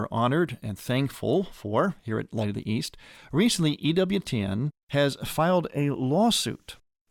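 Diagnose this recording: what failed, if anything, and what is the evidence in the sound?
Nothing failed, and there is no evidence in the sound of a fault at any stage of the recording.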